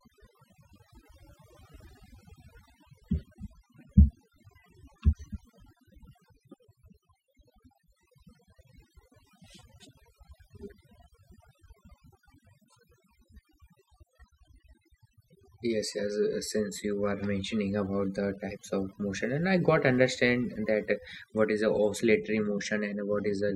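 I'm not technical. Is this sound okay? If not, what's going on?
No, not quite. The whole recording has overdone noise removal: a cleanup tool was pushed too hard, so the background noise got scrubbed down and broken into little twinkly specks, and it took the quieter bits of the voice with it.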